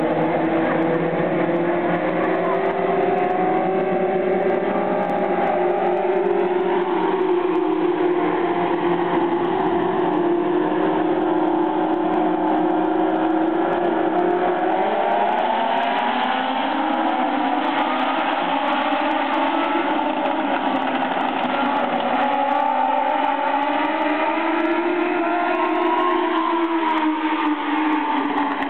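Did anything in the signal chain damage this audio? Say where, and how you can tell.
No, there's no audible damage from any stage of the signal chain in this audio.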